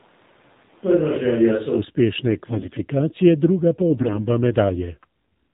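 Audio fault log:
Throughout: AMR narrowband mobile codec. The band stops sharply at 4 kHz, and the voice has a buzzy, synthetic edge, which fits AMR-NB at 7.4 kbps. A spectrogram shows a flat ceiling at 4 kHz, and harmonics are smeared into coarse, frame-stepped blocks.
0.00–1.77 s: switch to a distant microphone. From the start the voice sounds roomy and hollow, thinner in the bass, about 5 dB quieter, with room noise about 35 dB below it, likely because a farther microphone was in use. The waveform steps up when closer pickup resumes near 1.77 s.
2.28–2.84 s and 3.90–4.27 s: AMR bit errors. Corrupted frame bits misplace the excitation pulses and skew fine pitch and spectral values, so the voice keeps its pitch and level but turns hoarse, scratchy and gargly, worse in the second burst. Spectrograms show broken, noisy harmonic tracks.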